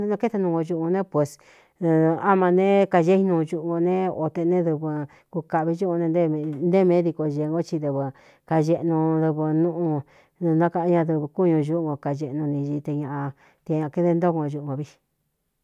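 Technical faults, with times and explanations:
The speech signal has no technical faults anywhere in its span.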